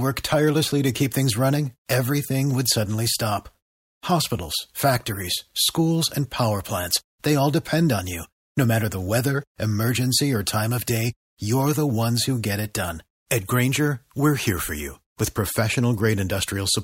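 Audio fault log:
No fault can be heard anywhere in the speech recording. Nothing in it calls for an entry in the log.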